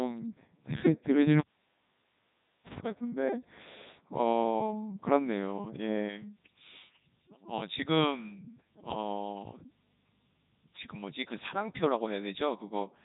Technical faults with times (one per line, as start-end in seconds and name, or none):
0.00-13.05 Codec 2 vocoder